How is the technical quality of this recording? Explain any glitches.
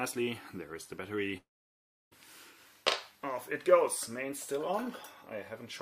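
The recording has one serious glitch, a long network dropout, most likely, from 1.37 to 2.13 s. The last sound is stretched into a brief fading buzz, then about 0.67 s of near silence follows. The audio resumes further along with roughly 0.74 s missing, which distinguishes it from a brief packet-loss click or a pause in the source.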